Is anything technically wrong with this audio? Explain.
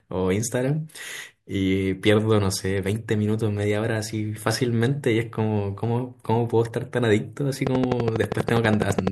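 Yes. A train of clicks runs from 7.67 to 9.08 s: about twenty regular pulses at 12.1 per second, peaking roughly 15 dB above the speech, likely from electrical interference or a faltering interface.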